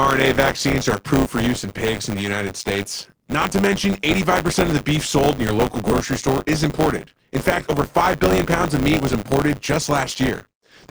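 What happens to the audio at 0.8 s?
At 0.8 s the speech carries buffer tearing, which runs through the whole clip. Writer and reader cross inside each period, so roughly a sixth of every buffer replays audio about 20 ms old, giving a steady 100 Hz robotic rattle. Unlike dropouts, it leaves no gaps and falls silent whenever the signal does.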